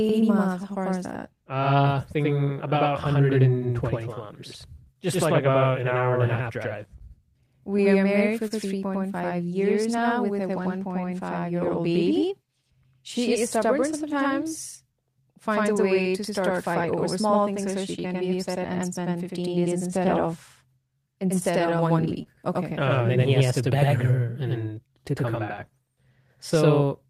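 Channel delay (doubling) affects the whole speech recording: one channel arrives about 93 ms late, which fits a 4096-sample buffer, and the mono sum leaves a same-level slap echo behind every sound. Clock drift between sender and receiver also runs throughout, with the sender's clock roughly 2% slow, so the receiver's jitter buffer keeps draining. Repeated timing corrections from 0.58 s to 27.1 s are the receiver's response: it repeats short pieces at uneven intervals, playing at 98% speed overall and stretching the audio by about half a second. Scattered short gaps at 5.17–7.02 s, 21.59–22.27 s and 25.36–26.89 s come from isolated lost or late packets, each patched by extending the previous sound, heard as brief ticks or smears, the longest about 15 to 30 ms. A short stall from a late packet at 8.48–8.52 s holds one sound for 24 ms while the empty buffer waits, then resumes with nothing missing.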